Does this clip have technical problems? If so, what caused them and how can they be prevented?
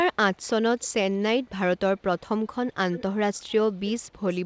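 Yes. An echo leak: a far-end echo canceller, likely behind a loudspeaker, let part of its microphone pickup return. A copy of the speech about 318 ms late surfaces at 0.78–1.5 s, 1.98–2.55 s, 2.92–3.02 s and 3.34–4.35 s. It is very faint in the second stretch and clearly audible in the last two. Headphones or a better-tuned echo canceller at that end would prevent it.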